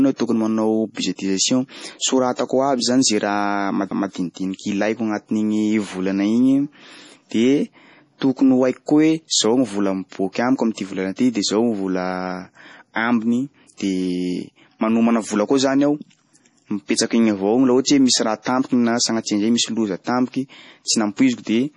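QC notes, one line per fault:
throughout, MP3 compression: watery, swirly speech with chirpy s sounds and nothing above 10.6 kHz, likely heavy MP3 encoding near 32 kbps dropping weak frequency lines.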